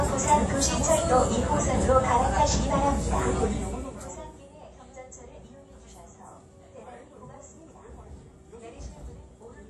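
Throughout, the sound rings and washes with breathing hiss, likely WMA compression at a rate near 48 kbps; spectrograms show smeared, gappy detail and nothing above 13.5 kHz.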